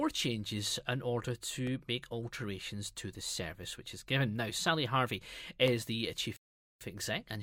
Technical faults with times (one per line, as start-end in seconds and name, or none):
0.67-5.68 periodic USB or driver dropouts
6.36-6.81 rebuffering stall